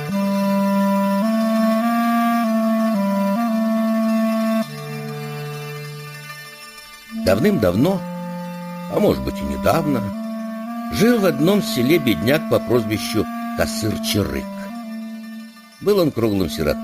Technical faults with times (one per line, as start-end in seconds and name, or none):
0.00-16.83 imaging from sample-and-hold upsampling